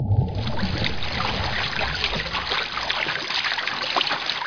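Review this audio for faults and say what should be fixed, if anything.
No faults turn up in this audio, so nothing needs to be fixed.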